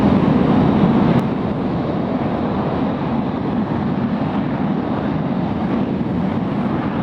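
At 1.2 s the sound and its background noise drop together by about 6 dB and stay there: a sudden gain jump, likely from an unramped gain change.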